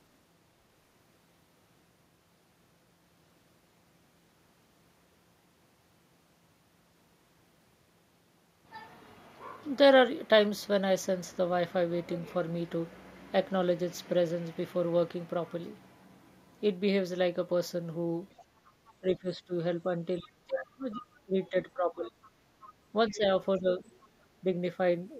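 From 18.38 to 18.92 s, a faint second talker sits well under the speech, the other side's voice leaking through, likely residual loudspeaker echo the canceller missed. It shows as weak, separate harmonic traces on the spectrogram. From 19.0 to 22.22 s, speech suppressed in double talk pulls the main voice down by as much as about 25 dB, in pieces totalling around two seconds. The waveform shows sudden notches, and the upper bands thin out on the spectrogram. Within that span, further leakage appears at 20.21 to 20.28 s and, louder at roughly 15 dB under the speech, at 20.91 to 21.49 s. A faint stretch follows at 22.06 to 23.17 s. A shallower dip of about 10 dB hits 23.09 to 23.83 s, and a very faint trace of the other side returns at 23.87 to 24.08 s.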